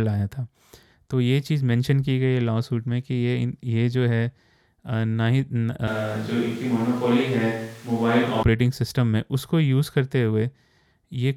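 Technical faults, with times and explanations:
5.88 to 8.43 s, switch to a distant microphone: the speech suddenly turns roomy and hollow, about 5 dB quieter, with room noise roughly 25 dB below it, likely because the close microphone dropped out. The waveform steps down, and the spectrogram shows thinner bass, smeared reverberant tails and a raised noise floor.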